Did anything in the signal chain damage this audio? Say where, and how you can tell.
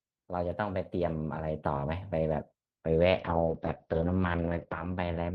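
Yes. From 3.2 s to the end, a call bitrate drop at the network and codec stage makes the speech rough and muffled. This fits the Opus encoder falling from 32 to about 7 kbps. On a spectrogram, energy above 6 kHz vanishes, where the call path previously reached 12 kHz.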